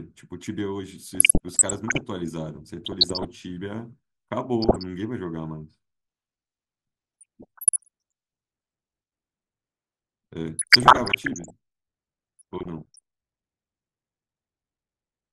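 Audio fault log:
Throughout: MP2 compression. The speech sounds dull, with a plainly audible gurgling, grainy distortion. Upper bands flicker in and out. The likely cause is MPEG Layer II coding at a rate near 80 kbps. Too few bits switch off high sub-bands and coarsely quantise the rest.
1.15–2.01 s, 2.85–3.25 s, 4.62–4.83 s, 7.21–7.88 s, 10.59–11.50 s, 12.39–12.99 s: DAB burbling. Short blips of noise sit over the speech. Bit errors slip past the error correction, about 0.5 to 0.7 percent of bits. Corrupted samples put noise blips in single sub-bands, and corrupted scale factors make sub-bands jump in level for up to a frame.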